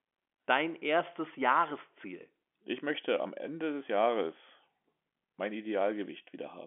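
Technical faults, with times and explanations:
No technical faults are audible anywhere in this recording.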